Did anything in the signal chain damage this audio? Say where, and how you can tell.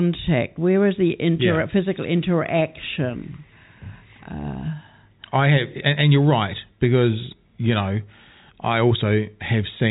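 No, nothing in the chain damaged this audio.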